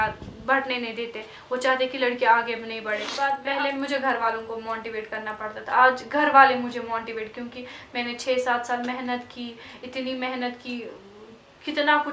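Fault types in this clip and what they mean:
Resampler restarted on every block: 50 ms blocks converted separately leave edge errors ticking at 20 Hz, seen as evenly spaced vertical spectrogram lines.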